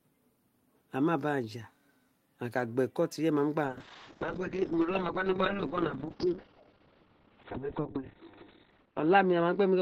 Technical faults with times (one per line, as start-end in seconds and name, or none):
3.66-9.81 call bitrate drop